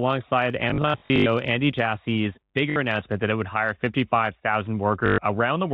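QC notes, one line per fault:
0.70–1.26 s, 2.70–2.76 s, 5.06–5.18 s: packet loss with last packet repeated. The receiver replays the previous chunk, and the 50 Hz buzz fits 20 ms packets. Each run stutters robotically. The waveform shows identical repeating blocks. The spectrogram shows frozen harmonics.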